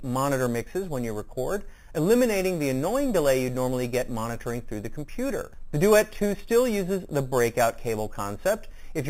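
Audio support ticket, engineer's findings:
Imaging from sample-and-hold upsampling, present throughout. Bright metallic fizz tracking the sound's level, mirrored band from 4 to 8 kHz, about 17 dB below the signal. Consistent with an 8 kHz source raised to 48 kHz by sample repetition, no anti-imaging filter.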